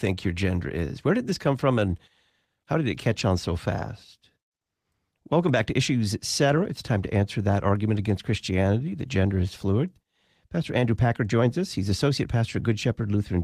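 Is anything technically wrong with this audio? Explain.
No, nothing technically wrong is audible anywhere in this speech recording.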